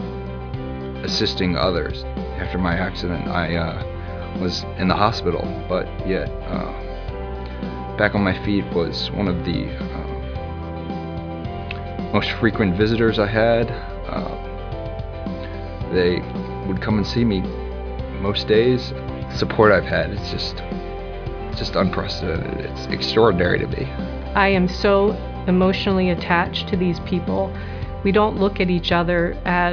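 No technical faults can be heard anywhere in the audio; the signal stays steady and intact throughout.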